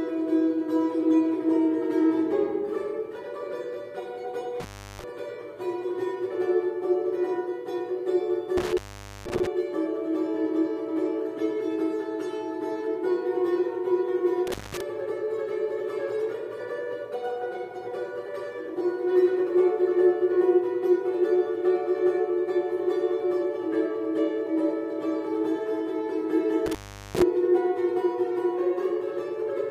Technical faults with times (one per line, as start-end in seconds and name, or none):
4.60-5.04 intermittent contact
8.57-9.47 intermittent contact
14.47-14.81 intermittent contact
26.66-27.22 intermittent contact